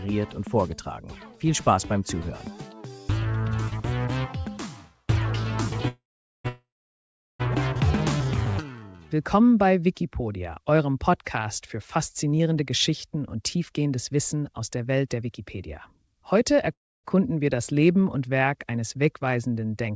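At 5.88 s the sound stops into a call audio freeze, likely from packets held up until the jitter buffer ran dry. A brief fading buzz gives way to about 0.44 s of silence, ending at 6.46 s. A second freeze follows at once, from 6.48 to 7.41 s, with roughly 0.75 s silent. Nothing is lost; the audio simply resumes later. On a spectrogram each freeze shows as a short smeared band that thins to a blank column, and the waveform as a decaying tail then a flat line.

From 12.25 to 16.13 s a jitter buffer speed-up shortens the audio by a few tenths of a second, running about 8% fast at unchanged pitch, so it sounds slightly hurried. The waveform shows no visible gaps, just events packed marginally closer.

A last freeze, 16.73 to 17.06 s, likely has the same cause: about 0.29 s of silence after a brief fading tail. Throughout, the spectrogram is empty above 8 kHz, which fits a wideband call codec.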